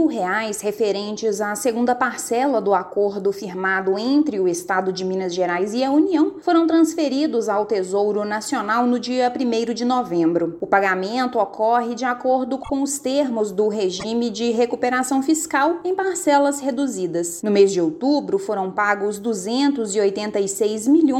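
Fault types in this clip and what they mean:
Repeated frames: a single compressed frame of about 26.1 ms was decoded more than once, so the same sliver of sound plays back to back as a brief stutter. At 12.63 s the block is heard three times in total, adding 52.2 ms; at 13.99 s it plays twice, adding 26.1 ms. The 26.1 ms block length fits an MP3-style 1152-sample frame at 44.1 kHz, and the clip runs about 78 ms longer than it should.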